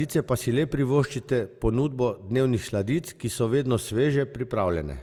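Throughout the speech there's a swirly, hollow smear with softened attacks, which points to generation loss, likely from a few passes through Opus at around 64 kbit/s.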